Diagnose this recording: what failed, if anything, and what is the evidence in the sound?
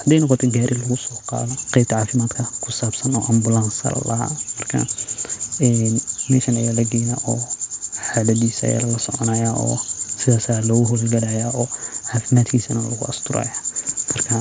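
The fault sits in the network and jitter buffer stage of the call path. About a second of speech went missing at 1.50 to 1.52 s, either lost in transit or discarded when the jitter buffer overflowed while later packets were already queued. This is a skip ahead: playback leaps forward with no silence or concealment filling the hole, so the speech on either side of 1.50 s is spliced almost directly and a chunk of the sentence simply vanishes.

Right after the skip, the same jitter buffer ran a speed-up to shed excess delay. From 1.56 to 3.57 s the speech plays at about 114% of normal speed, trimming roughly 300 ms. A second, gentler pass from 4.13 to 5.14 s runs at about 107%, removing around a tenth of a second. The receiver cuts out short pitch-period slices repeatedly, so pitch holds while the delivery sounds hurried. The band stops at 8 kHz, consistent with a wideband G.722 call codec.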